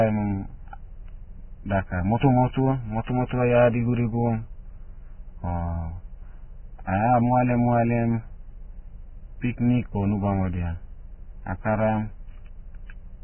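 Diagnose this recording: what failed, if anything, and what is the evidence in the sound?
The codec stage is the likely culprit: Vorbis compression run at a very low bitrate, with the sound pointing to roughly 10 kbps. Throughout the speech, nothing reaches above 3 kHz, so the top of the spectrum is simply gone. Below that cut-off the encoder had too few bits for fine detail, so the remaining treble becomes a grainy hiss of similar energy. The damage is heavy, leaving tones roughened and consonant attacks smeared.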